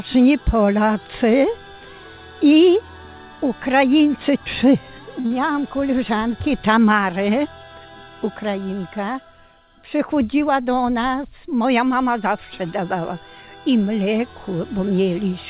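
At 5.2 s a packet arrived late and the jitter buffer ran empty. The receiver held the last sound for about 43 ms until it came, so nothing is lost. This is a short stall from a late packet, heard as a brief drawn-out sound with a slight buzz or dip, and the delay grows by 43 ms.

Straight after, from 5.26 to 5.32 s, about 40 ms of audio never reached the decoder in time. The receiver filled the gap by continuing the previous sound for 39 ms before blending back. This short concealed packet loss comes across as a quick smear or wobble just after the stall.

From 10.12 to 10.62 s the jitter buffer held more audio than its target. The receiver trimmed roughly 40 ms in small pitch-period pieces, a jitter buffer speed-up. For half a second the sound runs at 108% speed with unchanged pitch, so it feels slightly hurried. Throughout, nothing is heard above 4 kHz, which fits a G.711 mu-law call codec.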